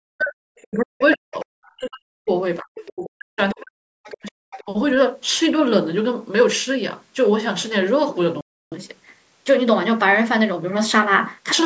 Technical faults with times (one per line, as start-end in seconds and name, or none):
0.00-2.29 speech suppressed in double talk
0.57-0.63 other side's voice leaking through
1.00-1.44 other side's voice leaking through
2.62-4.70 speech suppressed in double talk
2.75-2.93 other side's voice leaking through
3.49-3.54 other side's voice leaking through
4.05-4.64 other side's voice leaking through
8.41-8.72 playback stall
8.72-11.54 catch-up at higher speed